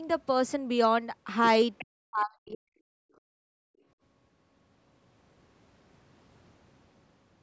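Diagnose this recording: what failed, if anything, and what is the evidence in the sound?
Residual echo in the call processing is the likely cause of two brief bursts of the other side's voice leaking through. The loudspeaker signal reaches the microphone and the echo canceller fails to subtract all of it. A faint second voice appears at 1.78 to 1.85 s, roughly 20 dB under the talker, and again at 2.52 to 2.57 s, about 25 dB under. Both are short scraps rather than sustained passages.

Speech suppressed in double talk follows, likely because the canceller's suppressor misjudged simultaneous talk as echo. From 1.82 to 3.35 s the talker's speech is pushed down, by as much as about 40 dB at its deepest, over roughly one and a half seconds in total. The talker's level sags while the far end is speaking, because the canceller attenuates the near-end signal along with the echo it cannot separate.

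Background gated by the echo canceller occurs at 3.63 to 3.84 s. With the loudspeaker active, the canceller's suppression clamps the microphone path, and the room sound drops by about 37 dB for around 200 ms before the gate releases and the ambience returns. This is the same call-processing stage acting on the room sound, which is why the dip shows up in the background texture.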